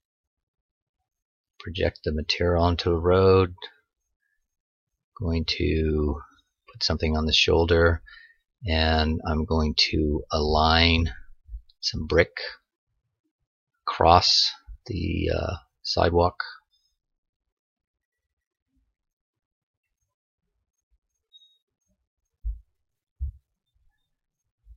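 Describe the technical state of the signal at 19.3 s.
At 19.3 s the signal is intact, with no audible technical fault at that moment.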